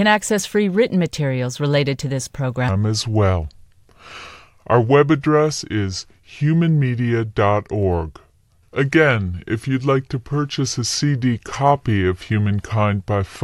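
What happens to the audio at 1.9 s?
Nothing goes wrong at 1.9 s; the speech plays through that moment intact, with no dropout, click or other fault.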